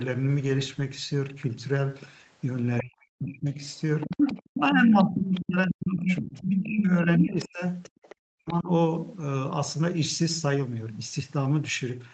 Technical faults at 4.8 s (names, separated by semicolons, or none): speech suppressed in double talk; other side's voice leaking through